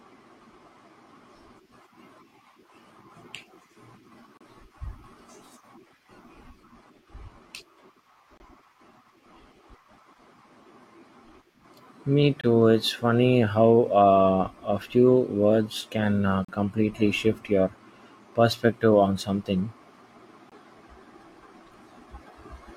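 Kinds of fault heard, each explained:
Gap between stream segments: at 4.37, 8.38, 12.41, 16.45 and 20.50 s, hard-edged silences of 22 to 38 ms fill where the timestamps of 4-second segments fail to meet.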